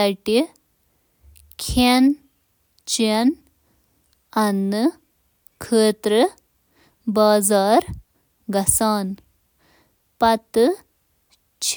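Across the whole recording, the speech signal stays steady, with no audible technical fault at any point.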